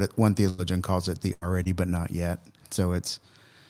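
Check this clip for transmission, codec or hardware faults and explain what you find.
Packet loss on the network path accounts for everything audible here, handled three different ways by the receiver.

Lost packet rebuilt from error correction, at 0.45 s, 0.58 to 0.60 s, 1.41 to 1.43 s and 1.65 to 1.67 s. The first falls after "it one" and before "calls it the", the third just before "but not yet". Each missing 20 ms packet was replayed from a low-bitrate copy carried in the next packet, so there is no gap. The sound turns briefly rough and noisy rather than smeared or silent.

Burst of packet loss, at 0.49 to 0.74 s and 1.33 to 1.43 s. About 80 ms of consecutive audio was lost each time, and the receiver stretched the last sound across the hole while fading it. A voiced sound becomes a held buzz, a noisy one a dying hiss, and then the speech jumps ahead with that stretch missing. The held buzz or hiss and the skipped portion distinguish it from the rebuilt packets.

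Short concealed packet loss, at 1.63 to 1.67 s. Only 20 ms failed to arrive, and the concealer extrapolated the preceding sound before blending back into real audio. The result is a quick smear or wobble that is far briefer than a burst.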